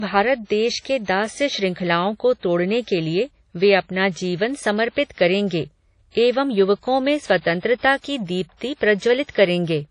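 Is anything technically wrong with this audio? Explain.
Yes. Low-bitrate audio saved at a high bitrate, throughout: the speech has nothing above 10.1 kHz, likely from a 32 kbit/s WMA source re-encoded as high-bitrate MP3, which cannot restore the lost band.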